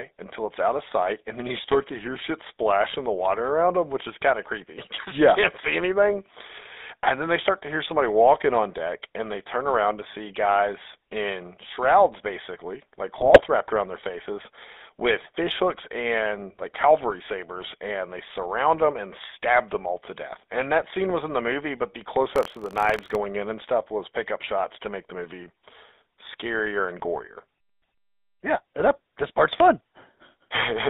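GSM full-rate codec damage runs through the whole speech clip: the band is held to roughly 250 Hz–3.7 kHz and the pulse-driven vocal-tract model leaves a buzzy, gravelly roughness, consistent with a 13 kbps coder. GSM bit errors hit at 4.94–5.04 s, after "is kind of creepy", and more heavily at 13.18–13.42 s, between "in shrouds basically like" and "wrapped around their faces"; corrupted filter, pitch and gain values warp or spike frames into squawks and gargling. Buffer tearing appears at 22.34–23.15 s, after "movie but the close" and before "in and stuff was": a robotic 43.1 Hz rattle where a small slice of each period replays audio about 50 ms old, which fits a 1024-sample buffer.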